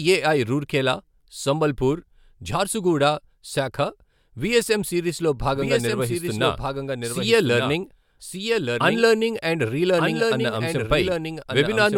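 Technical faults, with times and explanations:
5.55 s to the end: doubled audio track. From 5.55 s a second copy of the speech runs underneath the first, delayed by about a second and about 5 dB quieter, so every phrase is heard again in full a second later and overlaps the words that follow. The copy comes in abruptly and carries the full frequency range with no reverberant tail or room colouring, which points to the signal being recorded twice, likely through a second, slower capture path.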